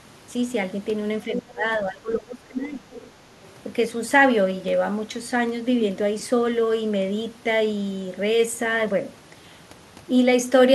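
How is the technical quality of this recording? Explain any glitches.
The recording has two related echo-control problems clustered between 1.26 and 3.11 s, both consistent with a two-way call.

Speech suppressed in double talk appears from 1.26 to 1.64 s and again from 1.86 to 2.86 s. The talker's level falls by roughly 20 dB, for about a fifth of a second in the first stretch and almost the whole second stretch. The likely cause is an echo canceller that, with both sides talking, couldn't tell the local voice from loudspeaker echo and attenuated everything. On a waveform the envelope sags abruptly; a spectrogram shows the upper harmonics thinning or vanishing in those spans.

The other side's voice leaking through follows at 2.93 to 3.11 s, a brief scrap of a second voice sitting roughly 20 dB below the main speech. It sounds faint, likely residual loudspeaker sound the canceller failed to subtract from the microphone signal. 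A spectrogram shows a weak, separate harmonic pattern that doesn't line up with the talker's pitch, and the waveform carries a small burst in that short window.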